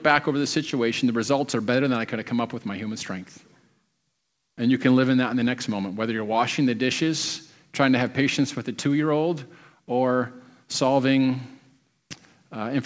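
Nothing's wrong with this bit of speech; it just sounds like it came over a call line, with nothing above 8 kHz, which fits a wideband codec such as G.722.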